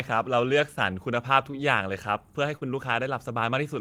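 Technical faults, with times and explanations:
1.51–1.55 s and 2.57–2.63 s, short concealed packet loss: 20 and 40 ms never arrived, so the decoder extended the preceding sound, heard as brief smears.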